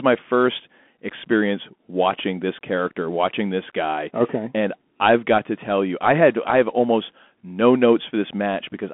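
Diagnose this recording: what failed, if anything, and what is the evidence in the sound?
Bluetooth CVSD headset codec damage runs through the whole clip, at the codec stage. The speech sits in a narrow telephone band of roughly 200 Hz to 3.4 kHz, with nothing above 3.8 kHz, and the codec damage is plainly audible. CVSD sends one bit per sample, up or down, with an adapting step, which fits a 64 kbit/s link. Loud high-frequency sounds outrun that step and distort, sibilants turn scratchy, and a granular hiss sits under the speech.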